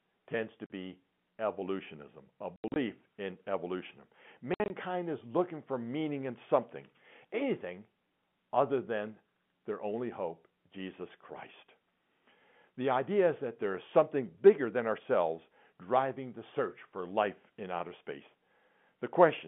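Packet loss filled with silence cuts the speech three times. At 0.66 s, after "tends to", a clean 40 ms hole opens, which fits two lost 20 ms packets. From 2.56 to 2.76 s, between "evolutionism a" and "in evolution", 140 ms drops out in scattered bursts of up to 80 ms. From 4.54 to 4.7 s, before "is looking for meaning", 100 ms goes in runs of up to 60 ms. Unlike concealed loss, the gaps are dead silent with hard edges, not smeared or repeated sound, heard through the narrow telephone band of the G.711 line.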